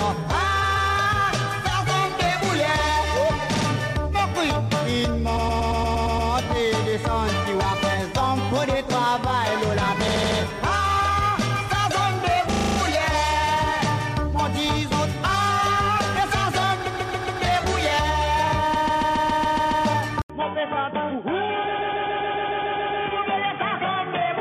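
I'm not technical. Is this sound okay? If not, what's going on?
No. In two ways the recording didn't capture the sound cleanly.

First, repeated frames: small chunks of the recording were saved more than once, so the playback jumps back and replays the same sliver of sound, like a skipping CD. It happens at 0.62, 3.54, 5.36, 10.07, 12.51, 16.86, 18.73 and 21.73 seconds. Each loop lasts between a few hundredths of a second and about a seventh of a second, and repeats two to nine extra times. The longest stutters, at 18.73 and 21.73, each add roughly a second.

Second, from 20.22 seconds to the end, the sound changes in a way that points to the input switching to a poorer device, most likely a lower-quality microphone taking over. There's a brief gap of silence at the switch. After it, the sound becomes duller and more muffled because everything above about 3.5 kHz is gone. A faint new background noise also comes in, though the loudness stays about the same.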